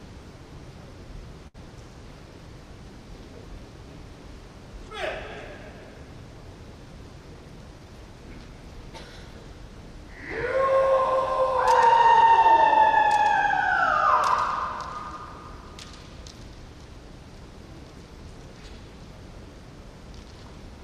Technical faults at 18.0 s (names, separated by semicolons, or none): none